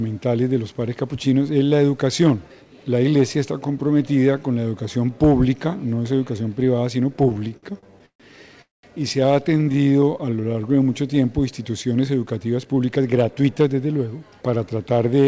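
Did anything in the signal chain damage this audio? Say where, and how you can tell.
Yes, the network and jitter-buffer stage of a call path damaged it. The audio passed through a call codec with nothing above 8 kHz, which points to G.722 at about 64 kbps, and the faults appear in the receiver's buffering after that.

Repeated stalls (stutter): from 7.24 to 8.22 s the sound keeps catching and dragging, with nine hitches. The longest lasts 139 ms, and about a third of that stretch is held-over sound. A shorter burst of seven brief catches, none longer than 20 ms, follows from 9.55 to 9.92 s. Packets were arriving late, so the jitter buffer kept running dry and the receiver stretched the last sound each time. About 317 ms and 89 ms were filled in, and nothing is lost.

Call audio freeze: from 8.62 to 8.85 s the sound stops and hangs. A brief tail of the previous sound fades, then roughly 170 ms of silence follows before playback resumes where it left off. 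This is likely a network hold-up that emptied the buffer completely. The receiver concealed about 216 ms and then continued, so everything after it is shifted late by that amount rather than missing.

Jitter buffer slow-down: from 9.93 to 10.54 s the audio is drawn out at an unchanged pitch, running at about 89% speed. Right after the stutter, the buffer was rebuilding its reserve by repeating single pitch periods and pause fragments over and over. That adds about 77 ms, which is heard as a sluggish, drawn-out stretch.

Jitter buffer speed-up: from 12.58 to 13.48 s the audio sounds hurried but keeps its pitch, running at about 112% speed. Delayed packets had piled up, leaving the buffer over its target. The receiver trimmed short pitch-period pieces in quick succession and dropped roughly a tenth of a second to bring the latency back down.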